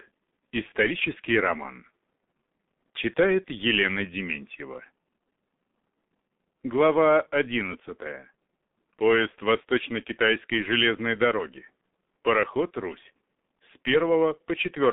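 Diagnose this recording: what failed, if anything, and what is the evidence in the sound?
G.723.1 codec damage runs through the whole recording, so the failure sits at the codec stage. Nothing above 4 kHz comes through, leaving the speech muffled, hoarse and heavily degraded, with consonants smeared together. The blurring comes from a voice model updated only once per 30 ms frame, too slowly to follow fast articulation, and the depth of damage fits the 6.3 kbit/s rate. The faint room noise, about 50 dB below the speech, is part of the recording.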